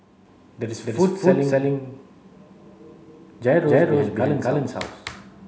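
Speech with a channel delay (doubling) fault running through the whole clip. Every syllable is followed about 256 ms later by a second copy at the same level, heard as a distinct slap echo. One channel has arrived late by a long buffer, which fits a 4096-sample offset, and the two channels have then been summed to mono. The late copy stands apart instead of blending with the original.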